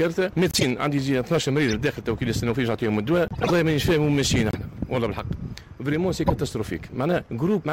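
Hard clipping runs through the whole clip. The signal drives about 7 dB past the limit, so about 4 percent of samples are flattened, giving harsh crackle on loud moments.

A corrupt frame decoded appears at 0.51 to 0.63 s, 1.68 to 1.75 s, 3.28 to 3.51 s, 4.51 to 4.55 s and 6.27 to 6.34 s. Damaged frames were played anyway, producing brief chirps and noise bursts. The loudest is the first, and the longest is the third.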